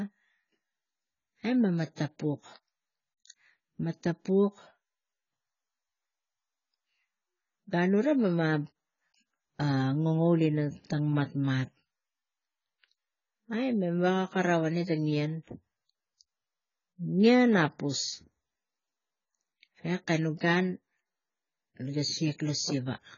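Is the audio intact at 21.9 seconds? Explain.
No, AAC compression runs throughout, including 21.9 s: the speech is dull and smeared with nothing above 7 kHz, likely from AAC-LC at a very low bitrate around 16 kbps.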